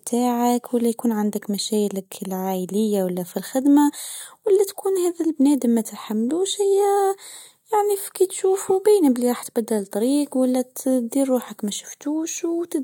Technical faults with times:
none

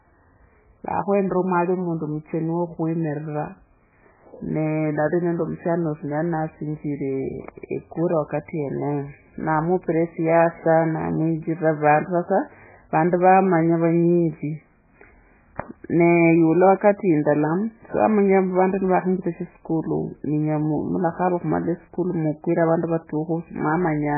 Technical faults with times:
0.00-24.18 MP3 compression

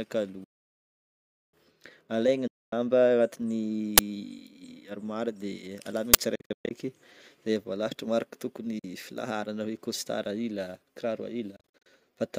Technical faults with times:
0.44-1.54 Bluetooth dropout
2.47-2.73 Bluetooth dropout
3.98 uninitialised buffer
6.14 uninitialised buffer
6.35-6.71 Bluetooth dropout
8.79-8.84 Bluetooth dropout
11.56-11.86 Bluetooth dropout

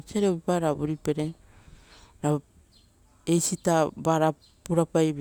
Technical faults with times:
none

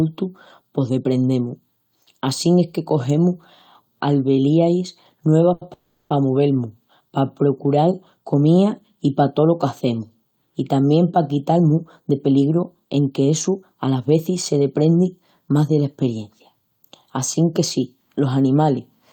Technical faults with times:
5.53-5.64 short stall from a late packet
5.73-6.13 call audio freeze
11.51-15.01 jitter buffer speed-up

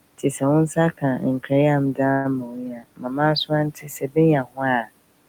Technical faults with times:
0.00-5.29 noise suppressor artifacts
0.18-0.42 speech cut by the noise suppressor
2.11-2.27 call audio freeze
2.43-3.19 speech cut by the noise suppressor
3.70-4.17 speech cut by the noise suppressor
4.43-4.63 speech cut by the noise suppressor

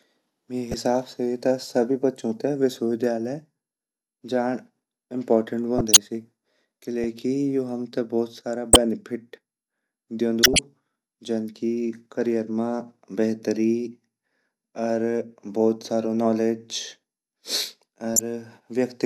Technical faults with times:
0.71-0.81 corrupt frame decoded
5.78-5.97 corrupt frame decoded
8.73-8.76 corrupt frame decoded
10.43-10.59 corrupt frame decoded
18.14-18.21 corrupt frame decoded

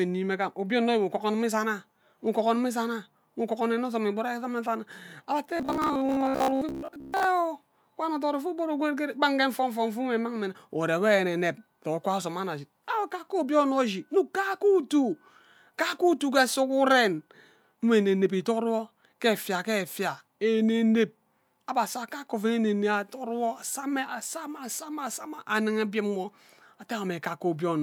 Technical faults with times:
5.57-7.35 robotic sound from repeated short buffers

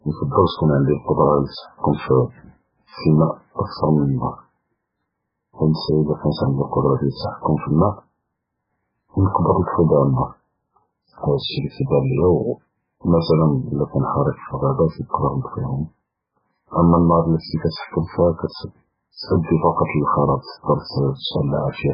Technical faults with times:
0.00-21.93 MP3 compression

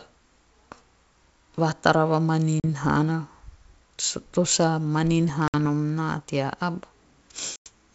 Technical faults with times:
2.60-2.65 packet loss on an ADPCM call
5.48-5.55 packet loss on an ADPCM call
7.56-7.68 packet loss on an ADPCM call

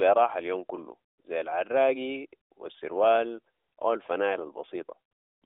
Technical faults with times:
none

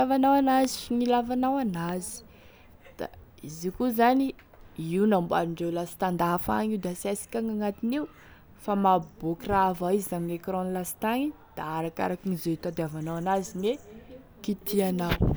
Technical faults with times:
0.64-0.66 loud pop
1.89-1.91 loud pop

